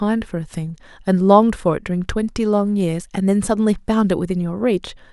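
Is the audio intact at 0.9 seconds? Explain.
Yes, the speech is intact at 0.9 s, with no dropout, click or other fault at that moment.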